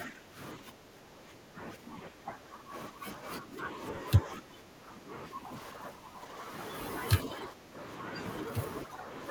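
The speech keeps sinking and breaking up in patches: from 0.04 to 0.39 s it dips by about 15 dB, then by about 10 dB across 0.57 to 3.25 s, 3.41 to 3.8 s, 4.23 to 5.56 s, 5.72 to 6.4 s, 7.25 to 7.8 s and 8.85 to 9.1 s. This is speech suppressed in double talk, likely from an echo canceller that, with both ends talking together, mistook the near talker for loudspeaker echo and attenuated it.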